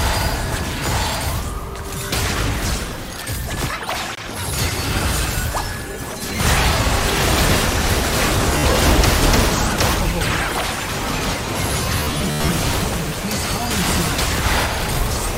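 At 8.58 s there's a brief Bluetooth stutter: roughly 53 ms of audio never arrived, so the receiver kept replaying its last short slice until fresh data came in. You hear a quick buzzy catch, and then the sound resumes slightly further along. At 12.00 to 12.49 s it's worse. About 293 ms went missing in bursts, the longest around 93 ms, so you get a machine-gun rattle. That points to a fair number of dropped packets.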